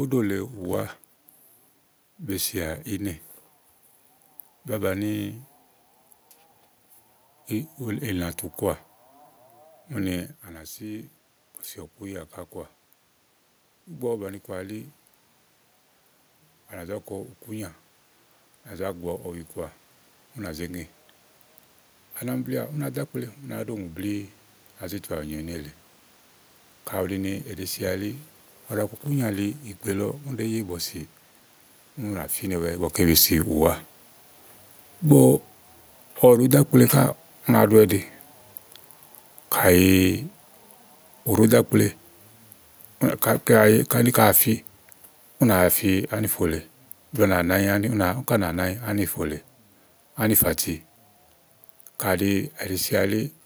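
From 33.0 s to 53.2 s there's automatic gain falling. The AGC judged the input too hot or its background noise too strong and eased its gain down by about 9 dB, so the speech and the room noise behind it sink together, gradually, almost to the end.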